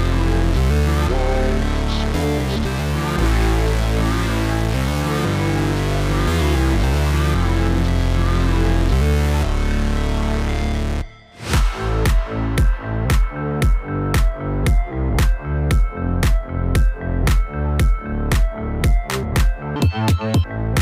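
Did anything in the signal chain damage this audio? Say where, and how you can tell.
Yes. From 19.76 to 20.44 s the audio was read two samples at a time (double speed), a fault at the sample-format conversion or driver read stage. The reader treated each pair of samples as a single frame, so this stretch plays at 2x speed and a full 12 semitones (an octave) high. On a spectrogram the harmonic spacing doubles and energy jumps upward. The waveform looks squeezed horizontally.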